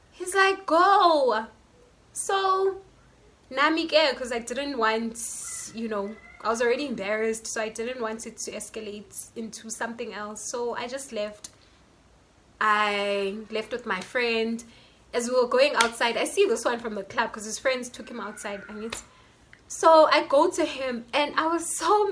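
No technical faults can be heard anywhere in the audio, and the signal stays steady and continuous throughout.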